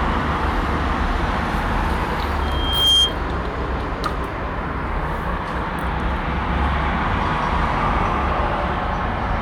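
From 2.41 to 3.16 s there is loudspeaker feedback squeal. A microphone picks up its own loudspeaker, and at 3.2 kHz the loop gain passes one. The tone swells over roughly half a second. It peaks a few decibels above the sound.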